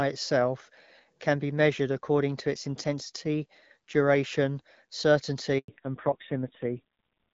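At 5.58 s the call is passed from one network to another, and a handover gap follows: no speech frames arrive during the switch, so the speech fades out almost at once and leaves about 100 ms of dead silence, until 5.68 s, with that stretch simply missing.

From 5.68 s to the end, the call falls back to narrowband. The HD Voice link, whose speech had sounded clear with only light coding roughness, is replaced by an older codec. Everything above 4 kHz disappears, so the speech turns dull, muffled and gritty, a rasp that fits a low rate of around 5.9 kbit/s.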